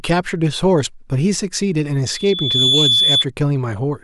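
At 2.05 s a loudspeaker feedback squeal begins in the speech. A microphone is hearing the loudspeaker it drives. At one frequency the loop gain passes one, so that frequency keeps feeding itself. Here it is a pure tone near 3.4 kHz. It swells over roughly half a second into a piercing whistle. It ends up around 5 dB louder than the speech. It stops at 3.25 s.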